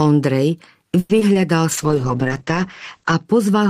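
At 0.99 s the packets were likely held up in transit so the jitter buffer ran dry. This is a call audio freeze. Until 1.11 s the last sound is stretched into a fading buzz or hiss for about 100 ms. When the audio resumes it picks up where it stopped, with nothing lost but everything after now running 100 ms late.

Two short concealed packet losses follow, at 1.19 to 1.23 s and 1.33 to 1.37 s. In each, 20 ms of audio never reached the decoder in time. The receiver filled each gap by extending the preceding sound and blending back, which leaves a brief smear or wobble in the speech.

From 1.72 to 3.31 s a call bitrate drop takes the encoder from 32 kbps down to 9 kbps, where it stays for 1.43 s. The coarser coding makes the speech rough and watery. The audio band also shrinks from 20 kHz to 8 kHz, so it sounds muffled until the rate recovers.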